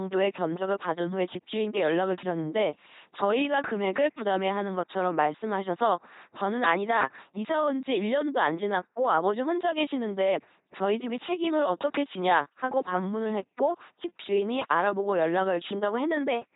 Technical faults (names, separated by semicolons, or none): LPC-10 vocoder